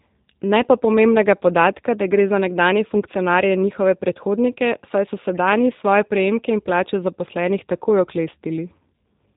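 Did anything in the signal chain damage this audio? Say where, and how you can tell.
Yes: the codec stage applied G.729 coding, which fits an 8 kbit/s rate. It rebuilds the speech from a vocal tract model and sparse pulses, leaving it band-limited below 4 kHz and audibly rough throughout.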